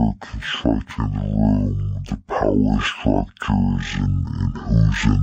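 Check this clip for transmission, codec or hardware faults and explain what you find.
There's one fault, running the whole way through: stereo read as mono. The interleaved left and right samples are being played back-to-back as one channel, so the speech crawls at half speed, sits a full octave low, and carries a faint mirrored copy up in the top half of the spectrum.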